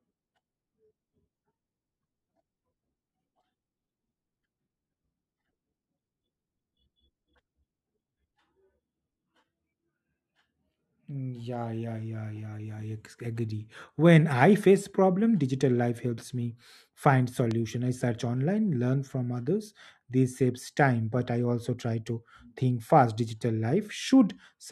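Between 17.51 and 17.54 s, just after "life helps me find", a single loud pop jumps about 10 dB over the speech, likely a voltage spike.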